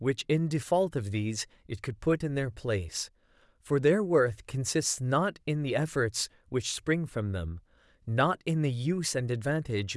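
Speech recording; no technical faults can be heard anywhere.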